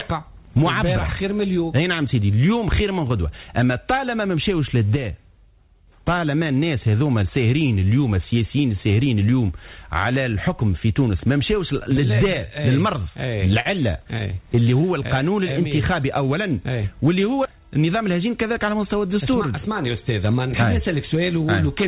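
At 4.96 s the level drops abruptly by about 5 dB and stays down until 5.88 s: a sudden gain jump, likely an unramped digital gain change. From 13.6 to 14.85 s, repeated stalls (stutter) appear as about a dozen brief holds of up to 50 ms, where the jitter buffer ran dry and the last sound was stretched.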